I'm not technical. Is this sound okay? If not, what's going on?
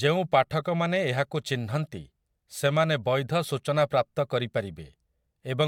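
Yes, no technical faults are audible anywhere in this speech recording.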